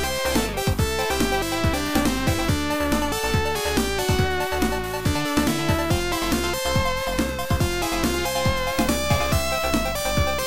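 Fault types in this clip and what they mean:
Video or display buzz: interference from a screen or video cable leaking into the audio path, arriving at 8.75 s and running to the end as a harsh buzz at the 59.94 Hz field rate, with hash above it and a thin whine at 15.7 kHz from the line rate, roughly 15 dB under the signal. A spectrogram shows a ladder of harmonics spaced 59.94 Hz apart plus a steady line at 15.7 kHz; the waveform carries a repeating spiky pattern.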